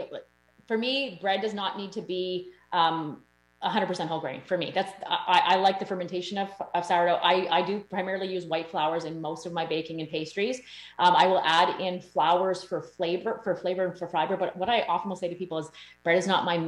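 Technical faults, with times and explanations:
Throughout, mains buzz: switching spikes from 60 Hz mains leak in twice per cycle, spreading harmonics into kilohertz as a steady raspy buzz, roughly 40 dB down.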